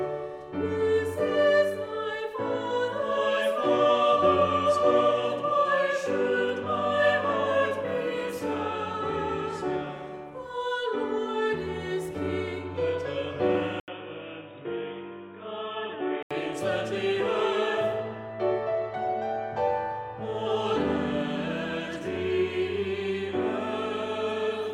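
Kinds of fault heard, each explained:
Input switched to a poorer device: from 13.8 to 16.3 s the sound turns dull and boxy, with nothing above 3.8 kHz, after an 80 ms gap. It is slightly quieter with a faint new hiss, likely because the input changed to a narrower-band microphone or headset.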